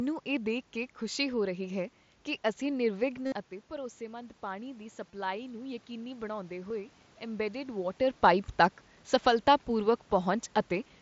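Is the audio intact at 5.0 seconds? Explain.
No. At 5.0 seconds the clip is in the middle of an automatic gain rising episode that runs from 3.72 to 7.0 s. After the level reaching the microphone fell by about 11 dB, the gain control slowly raised its gain by about 4 dB. What gives it away, rather than a talker simply coming closer, is that the room noise swells along with the voice, gradually over those three seconds.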